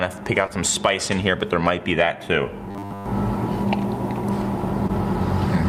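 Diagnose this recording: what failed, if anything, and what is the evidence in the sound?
Short concealed packet loss, a network-stage fault, occurs twice, at 0.45–0.49 s and 4.87–4.91 s. Each time about 20 ms of audio failed to arrive and the receiver's concealment filled the gap by extending the preceding sound before blending back. The result is a brief smear or wobble. Because each event is isolated and carries no steady pitch, it is distinguishable from the buffer fault below.

Robotic sound from repeated short buffers appears from 2.71 to 3.06 s. The sound is overlaid with a rigid, metallic buzz at 100 Hz while still loosely following its original contour. The likely cause is a starved driver or playback buffer that loops a roughly 10 ms segment and skips most of the real audio. The fixed 100 Hz pitch and the sustained, even stretch distinguish this from the momentary concealment smears.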